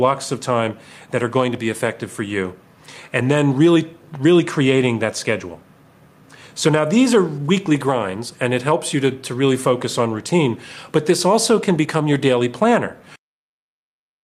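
Clock drift between sender and receiver runs through the whole clip: the sending clock is fast by something like five percent, so audio arrives quicker than the receiver plays it out. The jitter buffer keeps filling, and the receiver has to throw material away to avoid overflowing. The sound carries a faint, restless unevenness rather than any single obvious glitch. A waveform shows no gaps or dropouts.

Repeated timing corrections appear from 0.01 s to 14.2 s, the receiver's answer to that surplus. Short slices are cut out again and again, all in the same direction, at irregular spacing, leaving the material running at about 105 percent of its proper pace. Each cut is small and is heard, if at all, as a slight hiccup or a momentary lurch in tempo. On a spectrogram these show as tiny vertical seams where harmonic traces jump abruptly. The waveform shows matching small discontinuities scattered unevenly along its length.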